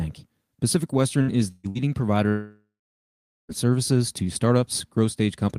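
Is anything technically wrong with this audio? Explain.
Yes. The speech has two kinds of network fault.

Three bursts of packet loss fall close together, at 1.21 to 1.30 s, 1.51 to 1.67 s and 1.70 to 1.78 s. Each time, incoming audio stopped and the receiver extended the last sound while fading it, for roughly 60, 120 and 55 ms. These come across as brief held buzzes or hisses, and the speech resumes further along with that stretch gone.

From 2.29 to 3.52 s there is a long gap that sounds like a long network dropout, likely from a stall in delivery. The last sound is carried on as a decaying buzz or hiss, then gives way to about 0.8 s of silence. When the speech returns, about 1.2 s of it is missing.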